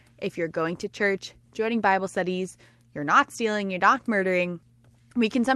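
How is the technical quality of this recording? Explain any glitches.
Glitch-free; the speech shows only the coding texture and a top end stopping near 12 kHz that fit an Opus call link at around 32 kbps.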